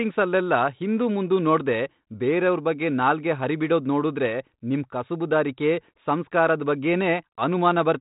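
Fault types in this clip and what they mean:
No faults can be heard in this speech clip. It comes through a G.726 ADPCM path at 32 kbit/s, so nothing above 4 kHz reaches the ear and only a light coding texture rides on the speech.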